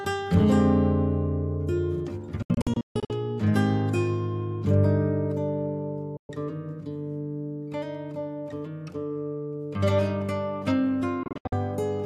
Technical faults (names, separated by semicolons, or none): digital broadcast dropout